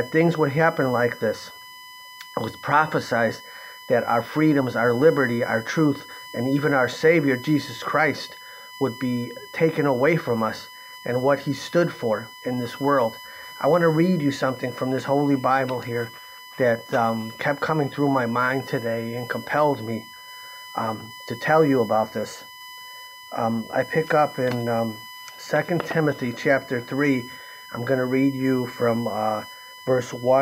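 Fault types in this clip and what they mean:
USB whine: a steady tone fixed at 1 kHz sits under the sound for the whole clip, strongest right at 1 kHz and roughly 20 dB below the programme level. The bus draws current in bursts once every millisecond, one per frame, and that 1 kHz ripple leaks into the audio path through shared power or ground, so the pitch never drifts.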